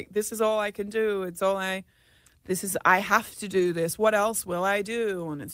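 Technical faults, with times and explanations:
3.59 to 3.65 s, lost packet rebuilt from error correction: for about 40 ms the speech turns rougher and noisier, with no silence. This points to two lost packets whose low-bitrate copies, carried in the following packets, were played in their place.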